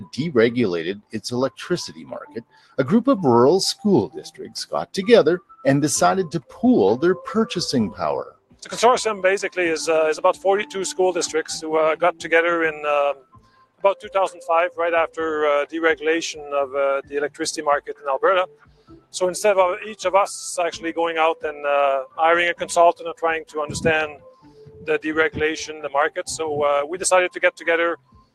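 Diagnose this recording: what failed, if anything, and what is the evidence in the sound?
The call-processing stage left a speech noise suppressor engaged on non-speech material. This noise suppressor, applied to music or sounds, treats steady content and tails as noise, so level swings by roughly 10 dB, with attacks passing while sustains sink and pump.

The sound was cut by the noise suppressor at 0.03–2.78, 4.15–6.59, 8.27–8.67, 13.14–15.18, 17.02–19.15, 23.14–24.88 and 27.33–28.35 s. There, held and decaying passages drop by about 16 to 21 dB, so their decays are clipped short while transients survive.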